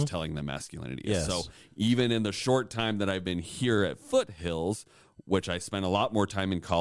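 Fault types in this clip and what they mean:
No faults detected; the speech carries no audible technical defect at any point.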